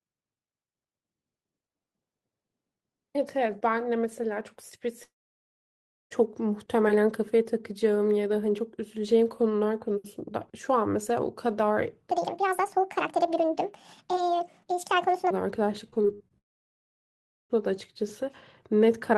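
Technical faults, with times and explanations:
5.03–6.13 s, long network dropout: about 1.1 s of the speech is gone. The last sound is stretched briefly into a fading buzz, then roughly a second of silence follows before the audio resumes further on, which points to a likely stall in the incoming stream.
12.11–15.31 s, section at the wrong speed: this stretch plays 1.69 times too fast, so the speech turns hurried and high, raised by about ten semitones. Pitch and tempo shift together, the likely result of playback against a mismatched clock.
15.91–16.32 s, repeated packet loss (robotic sound): six short holes, the longest 54 ms, each patched by continuing the previous sound. About a third of this span is filled in this way, giving choppy speech with fragments missing.
16.38–17.52 s, long network dropout: about 1.1 s is lost again. A brief fading continuation of the last sound gives way to roughly a second of silence, and the speech then returns without the missing part, likely from the stream stalling.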